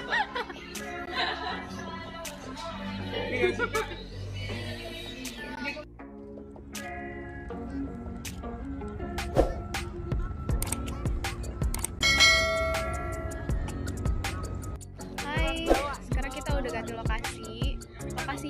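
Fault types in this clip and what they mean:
Bluetooth dropout: three very short holes, at 1.06, 5.55 and 11.99 s, each about 14.5 ms of silence before the sound picks up as if it had kept playing, most likely a single wireless packet arriving too late and being dropped.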